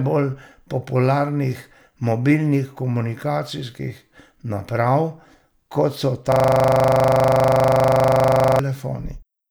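At 6.32 s the speech freezes into a system hang loop that lasts until 8.59 s. The computer or its audio driver stopped feeding new samples. The sound hardware kept replaying the same ring buffer. One 40 ms slice repeats about 57 times. That gives a loop rate of 25 Hz. The result is a rapid, rattling stutter, close to a coarse buzz. The length points to a buffer of roughly 40 ms.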